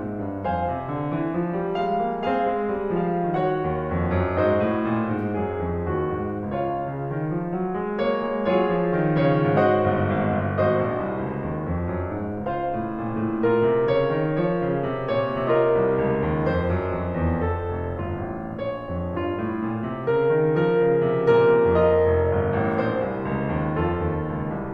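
No technical faults can be heard anywhere in this music clip. It runs without any dropouts, clicks, distortion or other breaks in playback.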